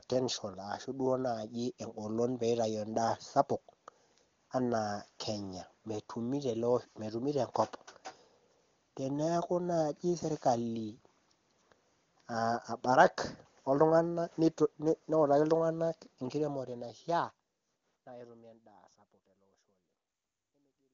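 Nothing goes wrong in this one; it's just speech that eases out in a gentle fade over the last few seconds.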